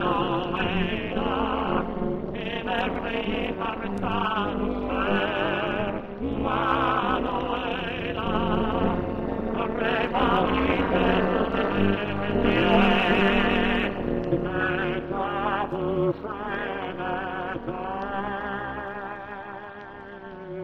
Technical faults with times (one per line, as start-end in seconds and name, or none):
0.00-20.63 overlap-add ripple